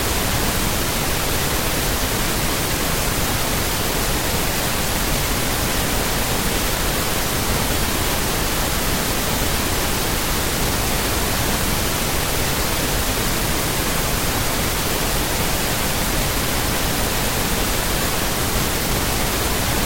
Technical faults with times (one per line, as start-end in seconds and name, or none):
none